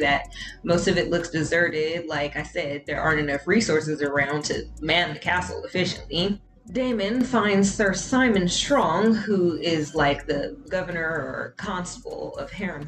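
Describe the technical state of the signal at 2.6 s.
At 2.6 s the signal is inside a one-channel dropout running from 1.70 to 2.95 s. What you hear is a sudden drop of about 6 dB in level for that stretch before snapping back. The likely cause is one stereo channel going silent. Once the two channels are folded to mono, material common to both loses half its amplitude, and anything carried only by the missing side vanishes outright.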